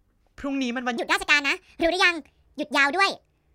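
A section at the wrong speed runs from 0.97 s to 3.54 s, where the speech suddenly plays about 1.51 times faster, with pitch rising roughly seven semitones, high and hurried. Speed and pitch jump together, likely because that stretch was played against the wrong clock.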